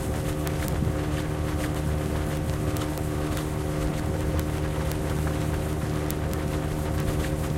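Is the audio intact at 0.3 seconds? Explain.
No, not really. At 0.3 seconds you're inside a run of word clock ticks that starts at 0.12 s and goes to the end at 7.57 s. The receiving gear is running on its own clock instead of locking to the sender's, which is off by roughly a tenth of a percent. About every 20 ms the two clocks slip past each other and a single sample gets dropped or doubled, so you hear a steady, sharp ticking of uneven strength over the sound.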